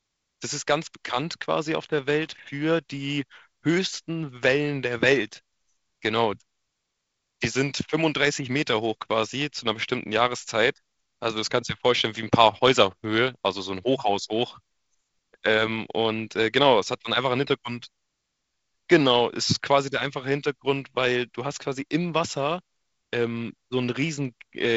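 At 2.25 to 2.39 s a loose connector crackle cuts in: a worn contact intermittently breaking the line, chopping the speech into an irregular burst of scratchy crackle, over wideband telephone coding limited to about 7.8 kHz.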